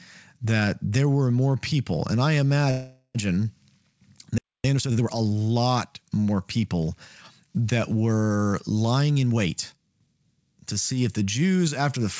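Call audio freeze, 2.71 to 3.17 s: the last sound is held as a fading buzz for about 0.44 s, with a 40 ms silence. The speech then resumes exactly where it stopped, nothing lost, likely because packets were delayed and the jitter buffer ran empty.

Playback stall, 4.38 to 4.64 s: the output cuts to silence for about 0.26 s mid-flow, likely as the player is starved of data, before continuing.

Time-compressed catch-up, 4.64 to 5.16 s: to clear the backlog, small pieces are cut and cross-faded, so speech runs 1.5 times fast at normal pitch, just before "lot more people that".

Jitter buffer speed-up, 8.94 to 10.15 s, between "more people that were" and "to see if the": an oversized buffer is trimmed by removing about 0.15 s of pitch-period slices, making the speech hurried, 110 percent speed, pitch unchanged. Throughout, the call path leaves nothing above 8 kHz, which fits G.722 at 64 kbps.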